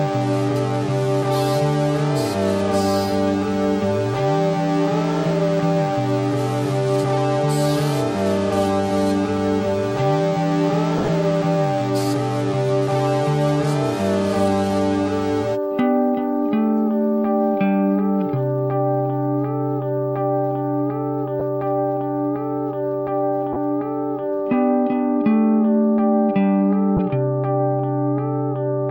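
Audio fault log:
10.98–11.08 s, 21.40 s, 23.53–23.56 s, 26.97–26.99 s: lost LE Audio frames. About 60 ms is missing across the first span, in gaps of up to about 20 ms, then 10, 30 and 20 ms. The LC3 decoder refills each gap from the last spectrum with randomised signs, so tonal content turns into a brief noisy smear.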